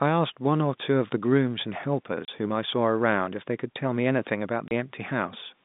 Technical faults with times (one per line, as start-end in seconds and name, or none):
2.25-2.28 packet loss filled with silence
4.68-4.71 packet loss filled with silence